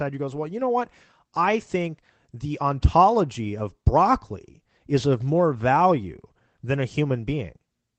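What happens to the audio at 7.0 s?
Nothing goes wrong at 7.0 s: the speech there is intact, carried by the call path with only the ordinary coding character and the upper band stopping around 8 kHz.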